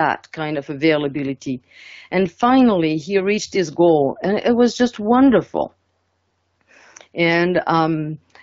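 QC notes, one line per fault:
No faults found in this speech. The AMR wideband (HD Voice) codec is audible as a band limit near 7 kHz and light coding texture, consistent with its 12.65 kbit/s mode.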